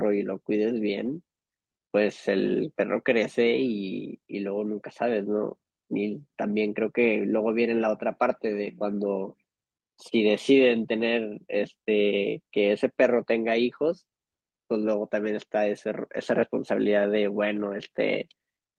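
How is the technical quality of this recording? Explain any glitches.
The recording is marred by four brief rough spots where packets lost over a call link were rebuilt by lost packet rebuilt from error correction.

At 1.05 s, 8.67 to 8.69 s and 11.63 to 11.65 s, a single 20 ms packet went missing. At 17.55 to 17.61 s, two separate packets were lost, covering 40 ms. Each time, the decoder filled the hole with a low-bitrate backup copy carried in the following packet, so nothing drops out. Those stretches sound momentarily grainier and noisier, with the last one lingering longest. The Opus call path's 12 kHz upper limit shapes the overall sound.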